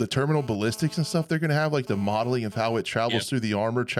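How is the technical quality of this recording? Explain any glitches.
The recording has one clear glitch. A GSM phone buzz runs from 0.35 to 2.81 s. A nearby 2G phone transferring data pulses its transmitter about 217 times a second, and the audio circuitry rectifies those bursts. The result is a hard, raspy, harmonic-rich buzz, about 22 dB below the speech, that comes and goes.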